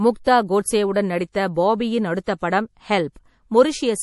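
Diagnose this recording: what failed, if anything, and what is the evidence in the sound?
MP3 compression damage runs throughout the speech, from start to finish, at the codec stage. The damage is plainly audible: a watery, swirling texture, which fits a low bitrate of around 48 kbps. The likely cause is an MP3 encoder starved of bits. It discarded weaker spectral lines. Those lines flicker on and off between frames, producing the swirl and smearing consonant onsets.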